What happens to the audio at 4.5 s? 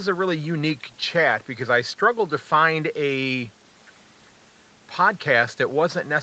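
Nothing goes wrong at 4.5 s: the speech continues intact through that moment, carried normally by the call path with its usual limited bandwidth, with no dropout, glitch or distortion.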